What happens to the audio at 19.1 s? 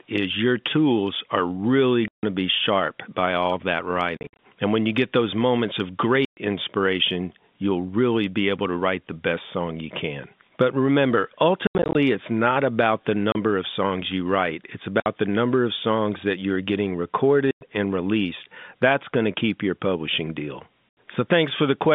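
Nothing goes wrong at 19.1 s: the speech continues intact through that moment, carried in the band-limited sound of an ordinary G.711 telephone line.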